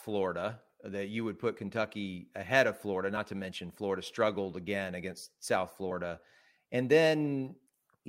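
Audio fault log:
1.56 s, compressed frames skipped: just after "that you would put", about one 23.2 ms frame is lost, so the speech jumps ahead about 20 ms.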